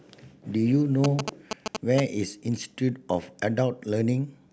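From 1.04 to 2.00 s the speech is overlaid by GSM signalling bursts: a nearby 2G phone's short radio bursts are rectified by the audio circuitry. This produces a galloping dit-dit-dit of short 217 Hz buzzes at roughly the speech level.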